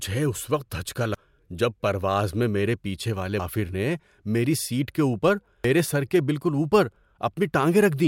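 At 1.14, 3.39 and 5.64 s the speech skips about a third of a second, likely audio missing between chunks of 2.5 s, leaving abrupt waveform joins and vertical spectrogram discontinuities.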